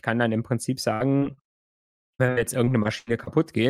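From 0.93 s to 3.29 s the speech suffers repeated packet loss (robotic sound): sixteen holes, the longest 77 ms, each patched by extending the previous sound. With about a fifth of that span filled in, it turns choppy with pieces missing, unlike a single isolated dropout.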